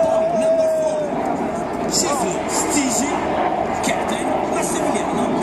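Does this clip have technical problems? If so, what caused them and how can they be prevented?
No, the signal carries no audible technical faults, so nothing here needs to be traced to a cause or prevented.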